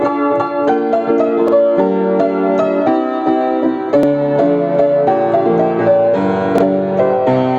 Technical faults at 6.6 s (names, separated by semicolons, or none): overlapping chunks